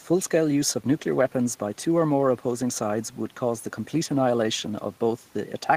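A speech recording with nothing technically wrong; the only background is room noise sitting about 34 dB below the speech, which belongs to the recording space rather than the system.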